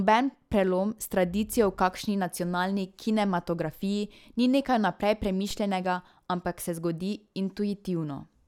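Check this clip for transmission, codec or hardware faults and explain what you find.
One fault is present. At 5.51 s there is a DC step. The waveform's zero line jumps by about -30 dBFS and then decays through a 5 Hz high-pass. You hear a single low thump while the speech carries on.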